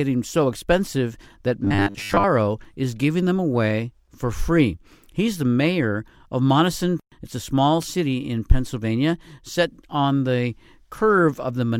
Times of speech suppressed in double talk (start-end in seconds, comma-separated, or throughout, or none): none